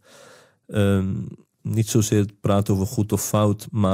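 From start to finish, the speech carries a buzz at 100 Hz. It is the resampler restarted on every block. Each 10 ms block was converted on its own, in a 48 kHz to 44.1 kHz conversion. At every block edge, the converter lacked the neighbouring samples, so each edge picked up a small error. With blocks this short, the ticks merge into a steady buzz. It rides on the speech and drops away in the gaps.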